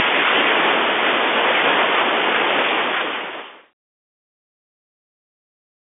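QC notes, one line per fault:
Nothing stood out on listening.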